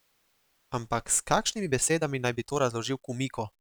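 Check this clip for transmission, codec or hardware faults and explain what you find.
One fault is present. From 1.39 s to the end at 3.60 s, the speech turns rushed at unchanged pitch: a time-stretched section, likely sped up 1.42 times by dropping short slices.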